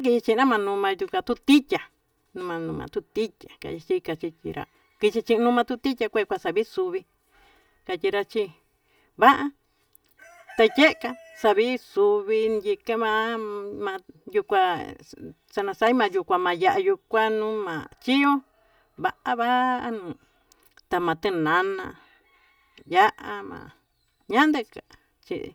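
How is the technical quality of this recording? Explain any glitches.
The recording has one fault, present throughout the speech: channel delay (comb filtering). One channel lags the other by roughly 3 ms, and summing the two to mono cancels shared content at evenly spaced frequencies, starting near 200 Hz. The result is a hollow, phasey tone with fixed spectral notches.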